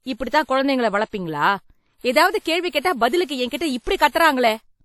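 Throughout the speech, a ringing, washy smear trails each syllable, a hiss breathes with the signal, and nothing sounds above 17.4 kHz. This is likely WMA compression at a low bitrate around 48 kbps, whose long blocks spread noise over tens of milliseconds.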